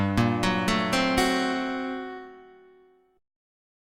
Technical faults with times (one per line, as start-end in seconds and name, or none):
none